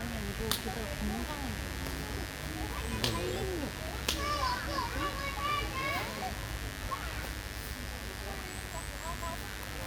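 From the first second to the end, a mains buzz runs under the everyday sounds, sitting only around 10 dB below them. It is locked to a 50 Hz supply: sharp switching spikes, entering twice per mains cycle through something such as a dimmer, a rectifier or a poorly shielded cable run, produce a stack of 50 Hz harmonics reaching well into the kilohertz range. The result is a steady, raspy, edged buzz rather than a smooth low hum.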